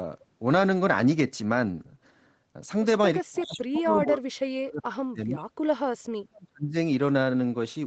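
An echo canceller likely mistook the talker for loudspeaker echo during double talk, so speech is suppressed from 3.22 to 5.62 s and 6.10 to 6.75 s, dropping by about 40 dB and breaking up.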